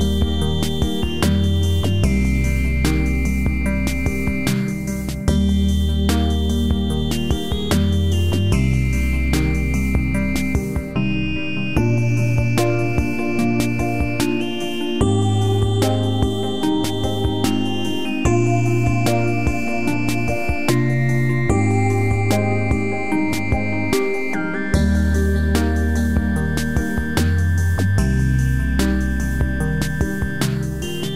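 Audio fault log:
Nothing stood out when listening to this recording.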